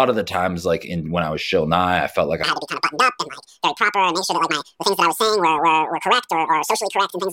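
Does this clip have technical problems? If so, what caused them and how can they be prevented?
Yes. A section at the wrong speed runs from 2.44 s, right after "I felt like", to the end at 7.33 s. The speech plays about 1.99 times too fast, so it turns hurried and jumps roughly ten semitones higher, most likely because that stretch was played against a mismatched clock. Matching the clock rate of every segment before editing or playback prevents this.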